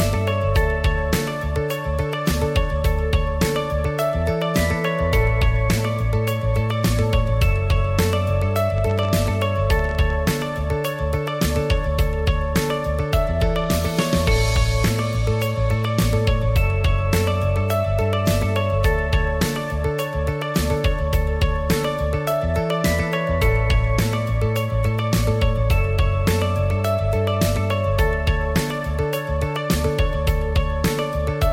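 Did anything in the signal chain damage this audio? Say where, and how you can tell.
Yes, there's a train of clicks from 8.78 to 10.11 s, around fifteen similar pops at about 12 per second, unevenly spaced and poking a few dB above the signal. That's likely interference getting into the analogue wiring or a faulty connection or power supply injecting pulses.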